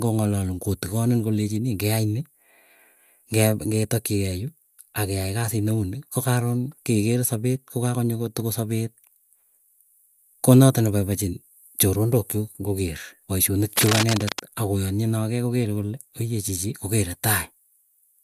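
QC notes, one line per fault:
13.76–14.39 s, cable scratch noise: just after "ng'o keer paishonik", a burst of dense, irregular crackling and rustling sits over the speech for about 0.6 s, only a few dB below the speech level, so it competes clearly with it. The texture points to a worn connector, lead or control being disturbed, which likely made its contact resistance jump about rapidly and modulate the signal with uneven noise.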